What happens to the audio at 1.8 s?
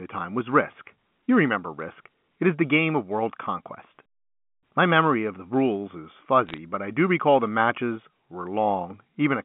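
Bit errors on a digital phone line strike between 1.80 and 1.84 s. Roughly 0.2 percent of bits on the G.711 link flip, and each flip corrupts a single sample, so hits on sign or high-order bits produce brief, sharp ticks crackling over the speech.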